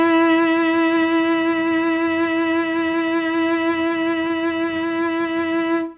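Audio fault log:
2.92–2.96 s and 3.87–3.92 s, short stall from a late packet: the buffer ran dry, so the music got held about 20 ms each time, with a slight buzzy dip before carrying on.
4.28–4.31 s, short concealed packet loss: about 20 ms never arrived, so the receiver extended the preceding sound and blended back, leaving a brief smear in the 4 kHz-limited music.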